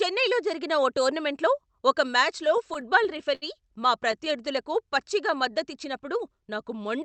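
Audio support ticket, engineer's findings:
Repeated stalls (stutter), 2.43–3.44 s: jitter buffer repeatedly ran dry as packets arrived late; receiver stretched the last sound across nine short gaps, longest 68 ms, about 14% of that span. Nothing lost, but the speech drags and stutters.

Jitter buffer slow-down, 4.28–5.53 s: buffer rebuilding its reserve by repeating single pitch periods and pause fragments, adding 62 ms. Speech runs at 95% speed, same pitch, sounds drawn out. Band tops out at 8 kHz, fitting an Opus call path.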